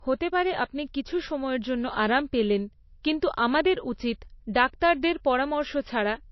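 Throughout, the speech sounds dull, with nothing above 5.8 kHz. This is likely low-bitrate audio saved at a high bitrate: a roughly 27 kbit/s MP3 re-encoded as a large file.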